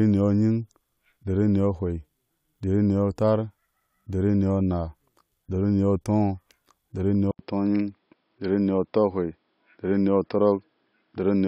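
A speech recording that turns duller and more boxed-in from 7.31 s to the end, after a brief 80 ms gap at the changeover. From there nothing above 5.3 kHz comes through, faint new background noise sits roughly 50 dB below the speech, and loudness stays about the same. The likely cause is an input switched to a poorer device partway through: the system moved to a narrower-band device with its own coloration and noise.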